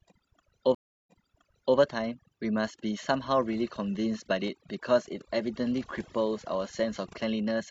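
From the start and through all 7.7 seconds of speech, overdone noise removal is at work. The suppressor has pushed individual frequency bands down to almost nothing whenever they sit close to its noise estimate, so the background collapses into near silence dotted with twinkling specks, and the quieter parts of the voice are stripped away with it. Unlike a plain low-pass or band-limited channel, the loss shifts moment to moment, which gives those isolated tonal flickers.

At 0.75 s a stream reconnect interrupts the audio. The connection dropped, about 0.32 s of silence follows, and when playback picks up again, with the event running to 1.77 s, a fresh decoder starts mid-stream at an earlier point, roughly 0.7 s back, so a stretch of speech already heard plays a second time. That repeated material is what separates it from a simple dropout or packet loss, where the gap is skipped and the audio simply continues.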